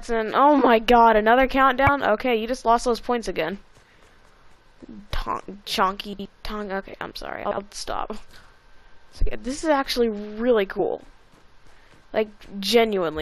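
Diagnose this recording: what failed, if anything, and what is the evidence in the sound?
The decoder is choking on damaged data in the compressed stream. There are three short blips: one at 1.87 s, one from 4.98 to 5.00 s, and one at 10.79 s. Each is a brief glitch. Some bytes in the coded frames got corrupted in storage or transit. The decoder misreads those frames, loses sync, and jumps to the next valid frame header.

The second problem is chunks out of order, which points to the network or buffering stage rather than the codec. There are two jumbled spots, from 6.13 to 6.25 s and from 7.45 to 7.57 s. In each, a 60 ms block shows up one chunk late and plays after the block that should have come after it. Nothing is missing, but the sequence is scrambled, with three hard joins in each of those garbled moments.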